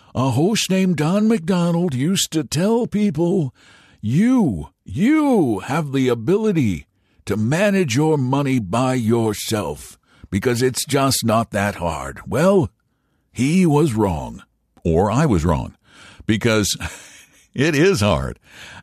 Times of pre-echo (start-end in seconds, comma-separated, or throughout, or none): none